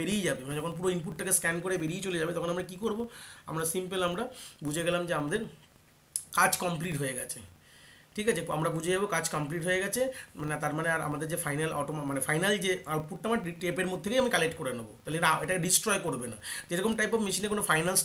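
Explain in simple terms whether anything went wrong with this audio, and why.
Something did go wrong: a filter restarted on every block. It forgets what it was doing every 40 ms, so each chunk starts with a tiny click. Across the whole clip those clicks pile up into a steady 25-per-second buzz that grows and fades with the loudness.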